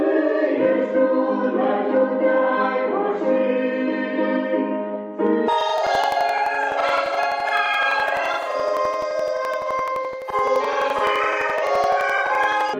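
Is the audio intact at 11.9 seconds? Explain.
No. At 11.9 s the sound is inside a stretch of planar audio read as interleaved, running from 5.48 s to 12.79 s. Each block of about 85 ms, which fits 4096-sample blocks, plays twice at double speed, left then right. The result is an octave high with an 11.7 Hz flutter. Unlike a simple speed-up, the overall pace stays unchanged.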